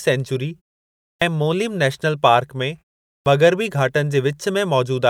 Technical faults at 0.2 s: none

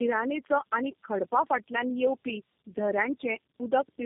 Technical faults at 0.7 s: tandem speech coding

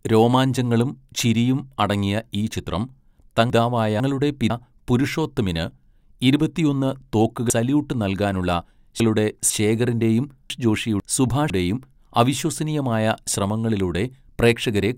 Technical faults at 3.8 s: chunks out of order

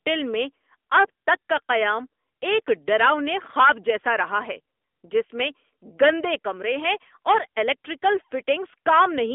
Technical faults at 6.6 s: AMR narrowband mobile codec

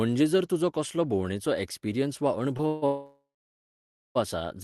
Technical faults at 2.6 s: short stall from a late packet; call audio freeze

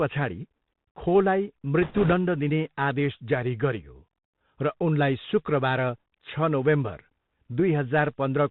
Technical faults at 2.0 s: Bluetooth CVSD headset codec; bit errors on a Bluetooth voice link

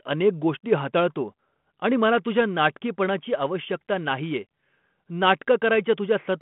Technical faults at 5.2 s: none

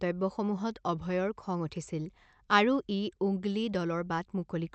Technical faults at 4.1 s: none

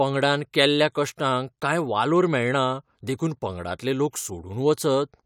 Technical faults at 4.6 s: none

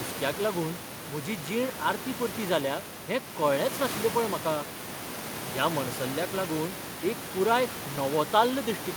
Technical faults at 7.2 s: none

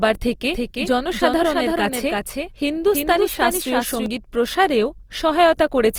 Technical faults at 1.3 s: Opus compression; doubled audio track

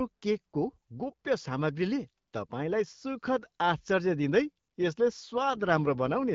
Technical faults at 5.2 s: AMR rate drop

